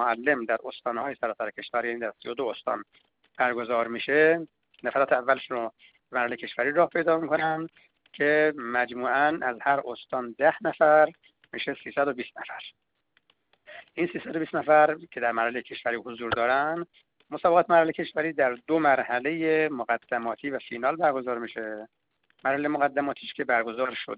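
No technical faults can be heard anywhere in the audio, and the signal stays steady and intact throughout.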